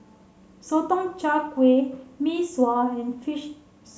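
No technical faults can be heard anywhere in the recording, and the signal stays intact throughout.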